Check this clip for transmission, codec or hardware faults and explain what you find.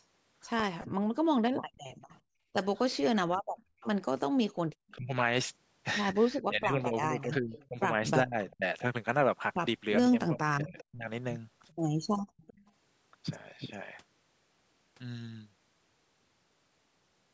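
Three echo-canceller faults affect the clip: speech suppression during double talk, a leaking echo, and gated background sound.

Speech suppressed in double talk, 0.86 to 11.07 s: the speech repeatedly dips, by around 40 dB at worst and about three seconds in total, most likely because the canceller mistook it for echo.

Echo leak at 1.75 to 2.17, 3.8 to 4.96, 7.2 to 8.56 and 10.78 to 12.72 s: a faint copy of the speech returns 400 ms late, roughly 25 to 35 dB down, likely from incompletely cancelled loudspeaker pickup.

Background gated by the echo canceller at 2.22 to 2.53 and 12.22 to 12.37 s: the canceller clamped the microphone during loudspeaker playback, so the room sound drops by about 34 dB.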